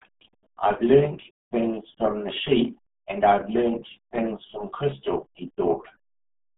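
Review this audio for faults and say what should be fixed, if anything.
Throughout, a RealAudio 14.4 codec squeezed the audio to what sounds like an 8 kbit/s dial-up stream, cutting everything above 3.8 kHz and leaving the speech heavily muffled and gargly. To prevent this, encode from the original source with a modern wideband codec at a sufficient bitrate.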